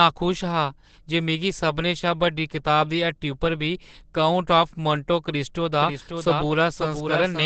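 From the first second the speech carries heavy codec damage: it sounds muffled and hoarse, and nothing is present above about 8.6 kHz. This is likely Opus compression running in its SILK speech mode at wideband, where a low bitrate (the sound fits something around 12 kbps) forces the encoder to model the voice coarsely. The result is a narrowed band and a rough, hoarse texture.

At 5.73 s a second copy of the speech cuts in abruptly and continues to the end. It trails the original by roughly half a second and sits a few decibels lower, about 5 dB down. It is full-band and dry, with no decay or room colour. This is a doubled audio track, likely from the audio being captured twice through paths of different latency or from an edit leaving two out-of-step copies.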